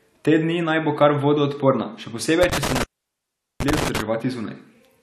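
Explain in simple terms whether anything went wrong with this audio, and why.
A loose connection in the cable or plug, an intermittent contact, made the speech drop out. Between about 2.43 and 4.01 seconds the connection kept breaking and remaking, and in total the line was open for roughly 0.77 seconds. Each time the contact breaks or reconnects you hear a short crackle, and while it is open the speech disappears, leaving only a faint hiss until the signal comes back.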